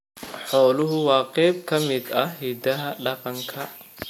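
From 1.96 s, right after "qayb ka", a high whistle between 12.6 and 12.9 kHz sits around 20 dB below the speech and continues to the end. This switching supply whistle comes from a power supply running in an audible burst mode or beating against another supply.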